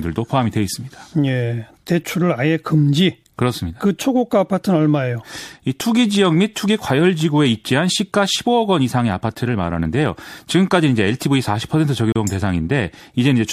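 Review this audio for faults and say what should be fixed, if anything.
From 12.12 to 12.16 s, a gap between stream segments: timestamps of adjacent segments leave a 33 ms hole filled with silence, which appears as a flat, hard-edged dropout in the waveform and a blank vertical stripe on the spectrogram. To prevent it, align segment timestamps so each segment begins exactly where the previous one ends.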